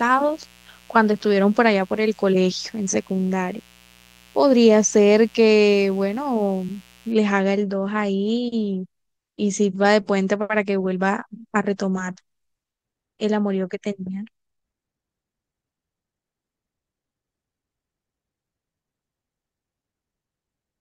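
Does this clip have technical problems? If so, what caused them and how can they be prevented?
Yes. A 60 Hz mains buzz, roughly 30 dB below the speech, runs from 0 to 7.12 s. Switching spikes leak in twice per mains cycle and produce the raspy tone. On a spectrogram it shows as stacked horizontal lines at multiples of 60 Hz reaching several kHz. Shielded cabling kept away from dimmers and rectifiers prevents it.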